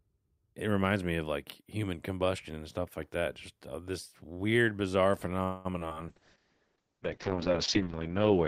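Speech, with a call audio freeze from 5.43 to 5.67 s, heard as a 0.21 s fading hold of the last sound, likely from delayed packets draining the jitter buffer. Nothing is lost, only stretched, unlike concealed loss. Short concealed packet loss follows at 5.73–5.76 s, 5.80–5.94 s and 5.88–5.93 s, brief smears where roughly 20 ms each went missing and was patched, with the middle event adding a few hundredths of a second. From 6.10 s to the end a call bitrate drop takes the encoding from 64 to 6 kbps, with the bandwidth falling from 20 kHz to 8 kHz. It stays at its lowest for 1.85 s and sounds muffled and watery, a sustained change rather than a momentary glitch.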